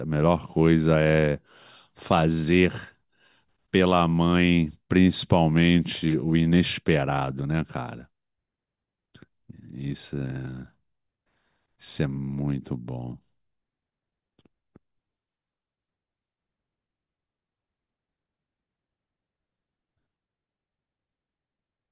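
Nothing in this recording stands out as a technical fault; it runs its full course with no dropouts, glitches or other problems worth pointing to.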